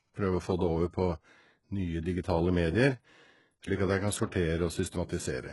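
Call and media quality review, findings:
Speech, full length: gritty, lispy sibilants, treble bright but unnatural; likely HE-AAC compression, heavy damage, fits roughly 12 kbps. Spectral band replication copies lower bands upward, so harmonics misalign above the crossover. Spectrogram: smeared, patchy copied upper bands, hard cutoff, nothing above 11.4 kHz.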